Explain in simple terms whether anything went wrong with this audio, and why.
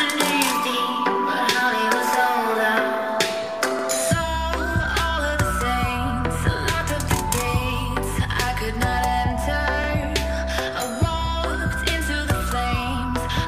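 The audio was handled in 6-second chunks that overlap, a fault called overlapping chunks. Each new chunk starts about 48 ms early, so that sliver plays twice, causing a brief stutter or click at 3.79–3.84 s and 9.84–9.89 s.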